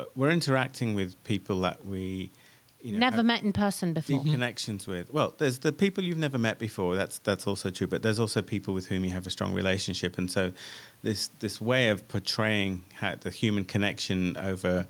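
Nothing goes wrong anywhere in this speech recording, and the only other thing to hear is a faint bit of room noise sitting about 38 dB below the talking.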